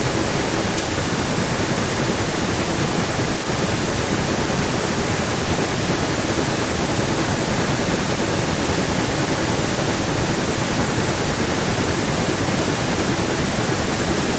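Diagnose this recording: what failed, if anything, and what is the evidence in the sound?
Echo leak, 0.0 to 14.39 s: a discrete copy of the speech returns 396 ms later, only slightly quieter. It is likely a far-end echo canceller failing, not smeared reverb.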